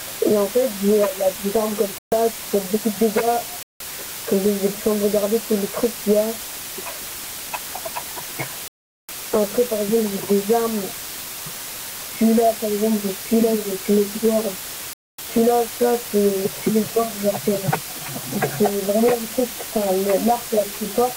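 From start to finish a constant, even hiss sits only roughly 10 dB below the signal. This is low bit depth with dither, consistent with about 4 bits, where added noise turns rounding error into steady broadband hiss. A spectrogram shows a flat noise floor covering every frequency.

Four dropouts to silence follow, likely Bluetooth stalls where the headphone buffer ran dry while delayed packets were resent. They occur at 1.98–2.12 s, 3.63–3.80 s, 8.68–9.09 s and 14.93–15.19 s, lasting 136, 175, 408 and 252 ms. Each appears as a flat gap in the waveform.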